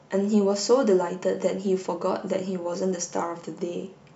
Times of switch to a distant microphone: none

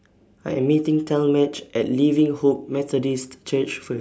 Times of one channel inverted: none

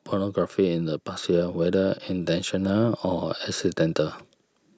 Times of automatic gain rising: 0.11-4.07

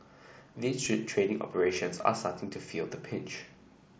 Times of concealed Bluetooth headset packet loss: 0.85, 2.01

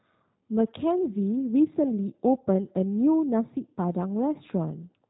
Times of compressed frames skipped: none

